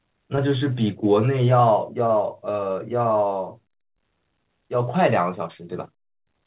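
At 0.36 to 0.39 s there is a short concealed packet loss. About 20 ms of the speech never arrived in time, and the receiver patched roughly 13 ms of it by extending the preceding sound before crossfading back into real audio. It is heard as a brief smear or wobble. On a spectrogram it appears as a thin blurred column, with no energy above 4 kHz, consistent with a G.711 call path.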